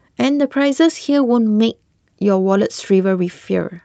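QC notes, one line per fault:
No faults found; the speech arrives over a call codec path, with its top end stopping near 8 kHz.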